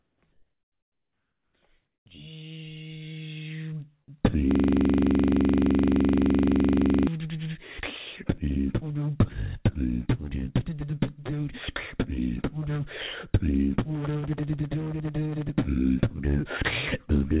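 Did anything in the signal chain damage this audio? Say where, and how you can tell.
Yes. In the first two seconds the quiet background, some 50 to 56 dB below the loud parts, turns into flat, featureless hiss at 0.0–0.22, 0.32–1.54 and 1.86–2.06 s, dropping about 4 to 8 dB. That's comfort noise in place of the background, likely from discontinuous transmission in call processing.

There is also a system hang loop at the driver or buffer stage: from 4.51 to 7.07 s the same 42.67 ms chunk repeats 60 times, a rough stutter-buzz at 23.4 Hz, which fits a 2048-sample ring buffer cycling while the system froze. The call codec's cutoff at 4 kHz is present throughout.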